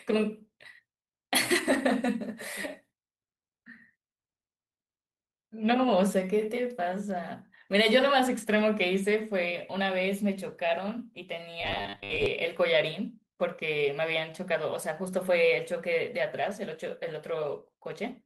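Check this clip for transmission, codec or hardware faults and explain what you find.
One fault is present. From 11.61 to 12.26 s, robotic sound from repeated short buffers: a rigid metallic 100 Hz buzz, likely from a 10 ms block looping for roughly half that stretch. The spectrogram shows evenly spaced 100 Hz harmonic lines, and the waveform shows identical repeating cycles.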